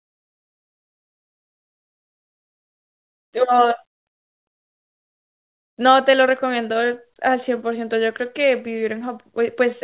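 Speech, with no technical faults audible anywhere.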